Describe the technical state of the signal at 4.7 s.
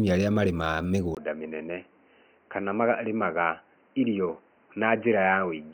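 Dull, with nothing above 3 kHz, and about 5 dB quieter from 1.15 s onward: likely an input switched to a poorer device. A 20 ms gap and a new noise floor about 40 dB down set it apart from simple filtering.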